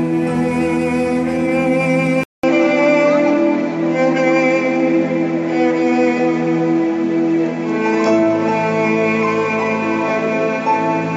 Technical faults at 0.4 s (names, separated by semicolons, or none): none